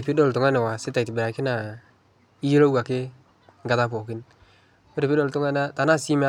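No technical faults are audible anywhere in the speech recording, and nothing in the signal path calls for attention.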